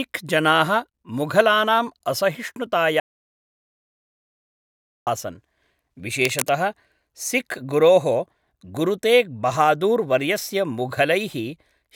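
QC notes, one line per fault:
3.00–5.07 s, audio dropout to silence: the speech cuts off into dead digital silence with no room tone for about 2.07 s, likely a lost input while recording continued.
6.22–6.54 s, cable scratch noise: a brief, dense burst of rough scratching sits over the speech, roughly 10 dB below it, likely from a worn cable or connector being moved.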